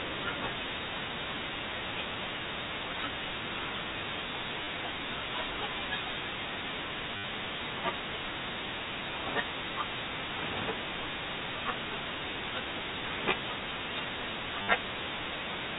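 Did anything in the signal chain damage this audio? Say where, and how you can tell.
Yes: packet loss with last packet repeated, a network-stage fault, at 4.64 to 4.67 s (30 ms), 7.17 to 7.24 s (70 ms) and 14.62 to 14.68 s (60 ms). Each gap is a brief robotic stutter, because the receiver looped the last good packet out of step with the pitch. The buzz within each run sits near 100 Hz, which fits 10 ms packets, carried over a G.711 A-law telephone path.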